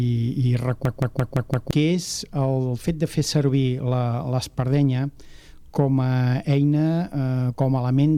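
From 0.85 s to 1.71 s there is a system hang loop: the host stalled while the audio hardware kept replaying the same ring buffer. A 171 ms slice of sound repeats exactly five times, at about 5.9 Hz, which fits an 8192-sample buffer. The result is a rhythmic machine-gun stutter rather than a buzz, and when playback resumes about a second of the original audio is missing.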